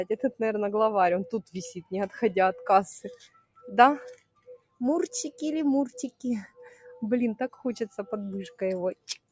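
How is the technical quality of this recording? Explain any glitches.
The recording is compromised by a speech-oriented noise suppressor acting on non-speech sound, with the call-style band limit removing everything above 8 kHz.

Noise suppressor applied to music or sounds, throughout: steady material is treated as noise and pulled down by roughly 10 dB, so the level flutters. Unlike compressor pumping, attacks mostly get through while sustains sink.

Sound cut by the noise suppressor, at 3.13–3.67 s, 4.14–4.8 s, 6.47–6.86 s, 7.49–7.65 s and 8.95–9.31 s: held passages and decays dip by about 15 to 21 dB. Transients survive, which distinguishes this from dropouts.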